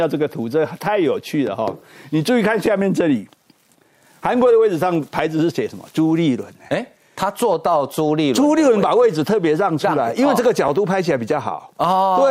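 Overlapping chunks at 2.66, 6.67 and 10.68 s: every 4 s, each chunk restarts 12 ms early, replaying that sliver and producing a brief click-like stutter.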